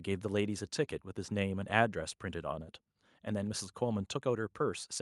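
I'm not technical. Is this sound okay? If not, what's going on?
Yes, this speech recording sounds fine, with nothing going wrong anywhere in it. There's no technical problem here that you need to worry about.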